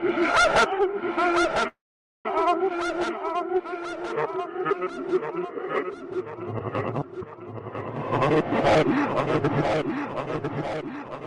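From 1.67 to 2.26 s there is a call audio freeze, likely caused by packets stalling in transit until the jitter buffer ran dry. The receiver carried the last sound on briefly, then went silent for about 480 ms. When the audio resumes, nothing is lost, but everything after it now plays about 575 ms late.

At 2.70 s there is a skip ahead. A stretch of roughly 150 ms was discarded while later audio was already waiting, so playback jumps forward almost seamlessly. The two sides of the cut meet directly, and that portion of the everyday sounds is simply gone.

From 4.37 to 6.24 s the jitter buffer was short of audio, so it stretched its reserve by repeating tiny pitch-period slices over and over. That jitter buffer slow-down adds 91 ms, so the sounds play at about 95% speed at unchanged pitch and come across slightly drawn out.

From 10.80 to 11.19 s the buffer held more audio than it wanted and trimmed short slices in quick succession to cut the delay. 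In this jitter buffer speed-up, roughly 50 ms is removed and the sounds run at about 113% speed without any pitch shift, giving a hurried, compressed feel.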